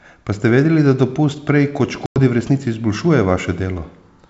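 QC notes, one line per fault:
2.06–2.19 s: packet loss on an ADPCM call. About 100 ms of the G.722 wideband stream drops out into a hard-edged silent gap, consistent with roughly five lost packets. Because ADPCM sends only differences, the receiver's adaptive predictor and step size no longer track the sender's once audio resumes. The restart comes back slightly distorted until the decoder state reconverges over the next few tens of milliseconds.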